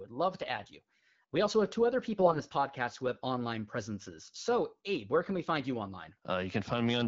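The speech turns hoarse and gargly at 0.56 to 0.68 s, after "love to", and more harshly at 2.19 to 2.40 s, between "also have two other" and "podcast who have online". These are AMR bit errors: flipped low-priority bits, heavier in the second burst, misplace excitation pulses in the AMR-WB HD Voice codec.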